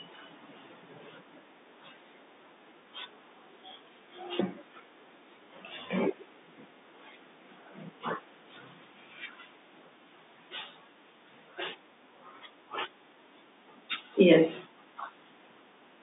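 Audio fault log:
No faults found; the speech sits in a telephone band of about 250 Hz to 3.7 kHz with nothing above 3.8 kHz, consistent with G.711 mu-law coding at 64 kbps.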